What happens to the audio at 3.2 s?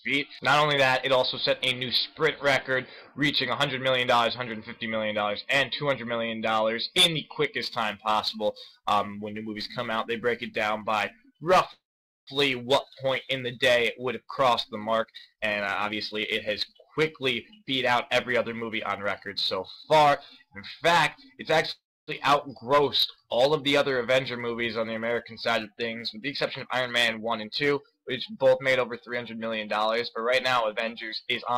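Nothing goes wrong at 3.2 s; the audio plays through that moment intact, with no dropout, click or distortion.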